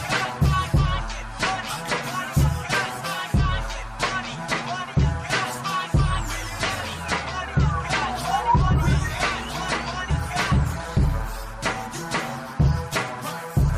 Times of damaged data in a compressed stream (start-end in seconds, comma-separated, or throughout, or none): 10.09